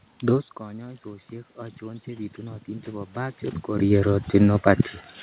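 From 0.57 s to 3.45 s there is automatic gain rising: after the input falls by about 16 dB as the talker moves back, the gain control slowly adds about 9 dB. Unlike a talker approaching, the room noise swells along with the voice.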